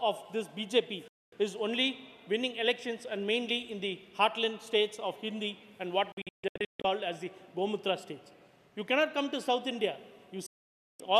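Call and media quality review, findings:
Digital broadcast dropout, 1.08 to 1.33 s: clean 240 ms mute, 3 ms fade. Receiver muting on failed frames. Waveform flat, spectrogram a full-band vertical gap.
Same fault, 6.12 to 6.85 s: scattered holes, about 500 ms lost, longest run 144 ms. Receiver muting on lost or failed frames. Comb of short blank columns.
Same fault, 10.46 to 11.00 s: about 530 ms muted. Receiver muting on lost or failed frames. Solid blank slab.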